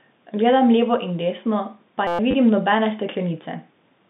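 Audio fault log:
2.07–2.19 s, system hang loop: Right after "levo in desno pa" the audio locks onto one 5.8 ms slice and replays it about 20 times, which fits a 256-sample buffer. That gives a steady buzz near 172 Hz and swallows about a tenth of a second.
2.31–2.34 s, packet loss with last packet repeated: A 30 ms gap gets filled by replaying the previous chunk, which fits three lost 10 ms packets. The repeats give a quick robotic stutter over the telephone-band audio.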